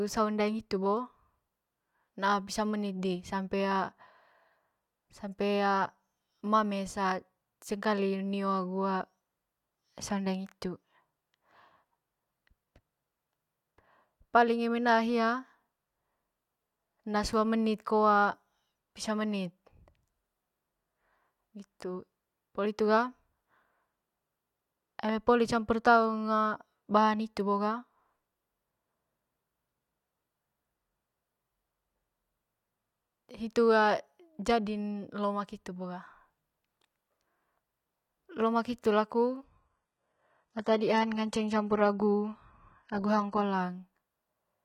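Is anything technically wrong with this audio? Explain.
Yes. From 39.44 s to 43.44 s the speech drops to an adaptive stream at a lower bitrate for four seconds. When throughput falls, the player switches to a lower-quality rendition and then returns. The switch is abrupt and leaves no gap. During the dip the treble is cut, with nothing above 11.8 kHz, and there are more codec artefacts. That character fits a low-rate HE-AAC rendition replacing a higher-rate AAC one.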